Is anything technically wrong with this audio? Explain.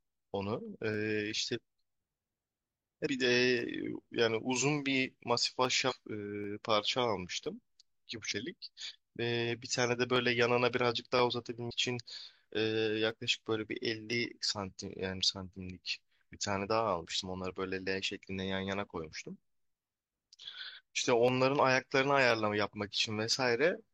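Yes, two faults are audible. Periodic USB or driver dropouts run from 0.94 to 23.33 s. Every 1.02 s, a blocked bus or driver skips roughly half a millisecond of speech, heard as regular ticks. Damaged data in a compressed stream appears at 3.02–3.07, 5.86–5.92, 8.27–8.32 and 11.66–11.71 s. There, corrupted frames make the decoder lose sync and resynchronise, producing brief chirps or blips.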